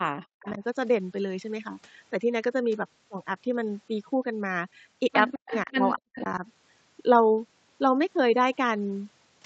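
Speech suppressed in double talk hits this speech clip at 0.00–0.62 s, 5.35–6.08 s and 6.38–6.44 s, where the voice dips by up to roughly 40 dB, most likely because an echo canceller ducked everything while both sides talked. Echo leak appears at 0.47–0.57 s, 5.33–5.72 s and 6.15–6.22 s as a faint copy of the voice trailing 207 ms behind, some 15 to 20 dB down, likely leaking past a speakerphone's cancellation. Throughout, the audio stops at about 8 kHz.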